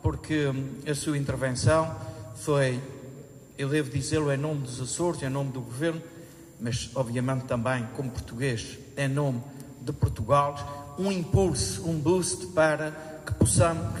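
A switching supply whistle runs through the whole clip. It sits near 7 kHz, wandering between about 7.24 and 7.33 kHz. A switching power supply is cycling at an audible rate. The thin, steady tone sits roughly 35 dB below the sound.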